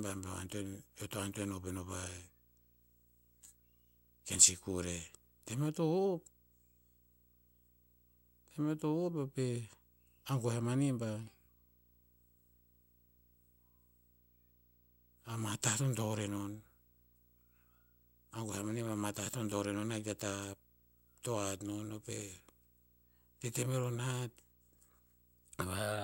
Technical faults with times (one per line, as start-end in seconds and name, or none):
0.00-26.03 video or display buzz